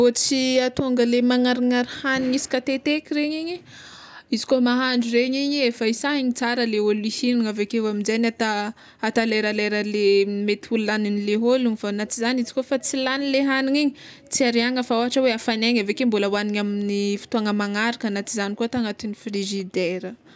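Nothing technically wrong turns up anywhere in this speech recording, so there are no problem spots to point to and no causes to track down.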